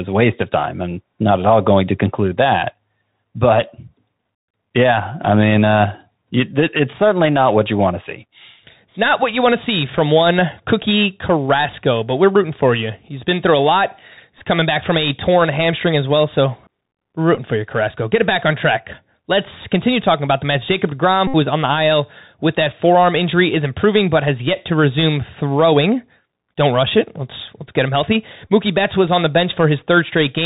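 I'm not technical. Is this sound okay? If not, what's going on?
No. The speech has passed through a Bluetooth CVSD headset codec, the narrowband format used by headset calls. Everything above about 4 kHz is cut away, so the speech sounds thin and boxed-in. The codec tracks the sound only by small up-or-down steps, so loud, sharp sounds outrun it and distort. S sounds come out scratchy, and a grainy hiss sits under the speech the whole way through.

There are also four moments where a Bluetooth headset packet was repeated. Data between headset and phone went missing, and the chip filled the gap by replaying the last chunk it had. At 14.39 s, 17.35 s and 28.48 s the gaps are very short and make a small tick or glitch. At 21.27 to 21.35 s the gap is longer. The same chunk repeats many times in a row and produces a brief buzz near 267 Hz before normal sound returns.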